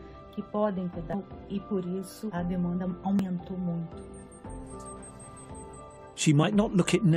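At 1.13 to 1.15, 3.19 and 6.42 s, damaged data in the compressed stream makes the decoder misread frames and lose sync, heard as brief glitches.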